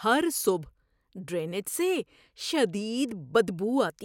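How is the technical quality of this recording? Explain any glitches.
No technical faults turn up anywhere in the recording; the signal holds steady with no dropouts, clicks or other glitches to explain.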